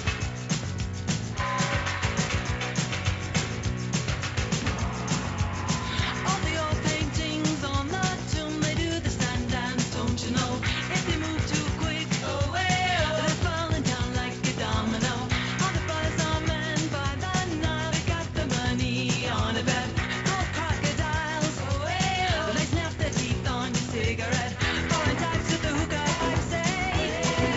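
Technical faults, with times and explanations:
Nothing stood out on listening; the sound comes across as an ordinary call over a WebRTC path, with its content stopping at about 8 kHz as the G.722 codec at 64 kbps would give.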